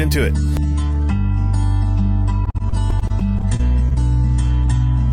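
Repeated packet loss, 2.45–3.98 s: a dozen-odd holes up to 39 ms, each patched by repeating sound, giving choppy sound and smeared, striped spectrogram columns.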